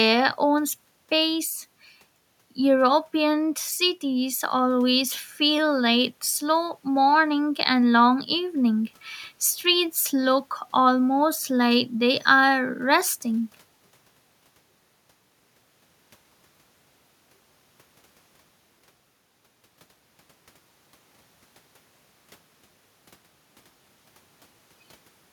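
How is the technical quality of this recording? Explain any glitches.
The recording has no technical glitches. Nothing in the audio needs explaining.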